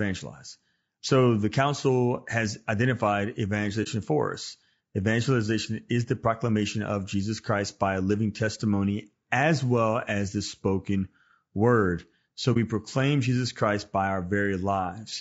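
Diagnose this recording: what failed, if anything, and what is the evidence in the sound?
Codec stage first: the whole clip of speech has plainly audible codec damage, a rough, grainy quality with noise filling in between the pitch harmonics and a top band that sounds thin and a bit synthetic. That's likely low-delay AAC compression, AAC-ELD as used in video calls. At low bitrate its coarse quantization can't code the spectrum cleanly, so detail gets smeared into noise, and the damage is heavy enough to suggest a low bitrate, somewhere around 32 kbps.

Then there are two soft-edged dropouts, which is AAC frame loss with muting, most likely down in the network. The first sits at 3.83 to 3.88 s, right after "the council has identified" and before "for us". The second is at 12.53 to 12.57 s. Each hole lasts about 30 ms, which fits losing a single frame. The decoder zeroed the missing spectrum, and the overlapping windows fade the sound out and back in, so it's a brief gap.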